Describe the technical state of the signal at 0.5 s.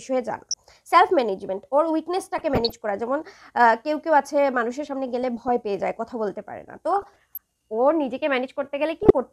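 DAB burbling runs from 0.51 to 0.54 s. Weak reception lets a few bit errors corrupt sub-band samples, producing brief noise blips in single sub-bands.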